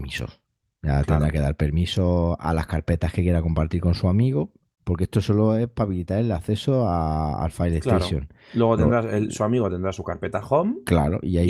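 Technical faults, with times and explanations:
Nothing stood out as a technical problem on listening to the speech in this recording.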